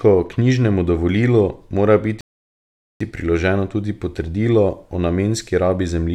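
A rebuffering stall interrupts the speech from 2.21 s to 3.0 s. The player used up the audio it had already downloaded and had to wait for more data before continuing. The sound drops abruptly into silence for 0.8 s, then picks up at exactly the point where it stopped. No speech is skipped or repeated, but the gap stretches the clip by that 0.8 s and breaks its natural pacing.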